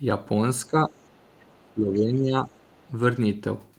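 From 0.67 to 0.96 s the speech sinks in patches, by roughly 10 dB at its deepest and for about half of that span. This is speech suppressed in double talk: the echo canceller most likely took the talker's own speech, overlapping the far end, for loudspeaker echo and attenuated it. Unlike a network dropout, the sound dims and thins. Unlike slow automatic gain pumping, it tracks the overlap.

Between 1.07 and 1.65 s the other side's voice leaks through faintly, around 35 dB under the speech, as the canceller likely left residual loudspeaker echo in the microphone signal. It is a separate second talker, not a smeared tail of the same voice as reverberation would be.

A deeper suppression follows from 1.6 to 2.51 s, dipping by about 15 dB across most of that stretch, again likely from double talk. The far-end leakage returns from 2.53 to 2.91 s, just as faint, likely from the same uncancelled echo.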